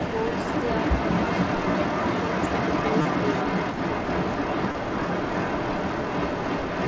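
From the start of the speech to the end, around 6.9 s, a delayed copy of the talker runs about 0.31 s behind the direct sound, at roughly the same loudness. This is an echo leak, most likely from a loudspeaker on one side of the call whose echo canceller let its microphone pickup pass back into the call. On a spectrogram the speech's harmonic pattern appears twice where the echo comes through, the second copy shifted right by about 0.31 s. In the waveform, gaps between phrases fill with the trailing repeat.

Three short dropouts are covered by concealed Bluetooth headset packet loss, where missing audio between headset and phone is patched by repeating the best-matching recent stretch of waveform. The first, at 1.72 s, lasts 15 ms. At 3.02 to 3.05 s, 30 ms is filled with a brief buzzy, held tone. At 4.72 to 4.75 s, 22.5 ms gives a shorter buzz. On a spectrogram each patch shows as frozen, evenly repeating harmonic bands with a slight smear where the real signal resumes. 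In the waveform they look like small, unnaturally periodic segments at full level. Nothing sits above 8 kHz, which matches the wideband headset path.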